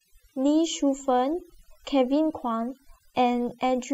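Overdone noise removal runs throughout this speech clip. A noise reducer set too aggressively keeps cutting individual frequency bands whenever they sit near its noise estimate, so the background drops and breaks up into twinkling specks, and quieter parts of the voice vanish along with it.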